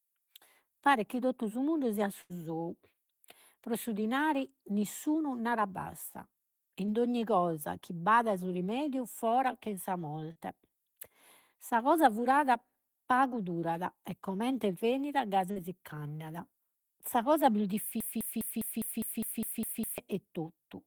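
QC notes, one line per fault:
2.21–2.32 s burst of packet loss: about 80 ms went missing; the receiver continued the last sound and faded it out, then resumed further on.
6.86 s, 10.32–10.37 s, 15.51–15.58 s short concealed packet loss: 20 to 40 ms gaps were filled by continuing the previous sound, heard as brief smears before blending back.
18.00–19.98 s broken-record loop: a 0.2 s fragment repeats exactly ten times back to back, likely a stalled stream resending its last chunk, replacing the real audio.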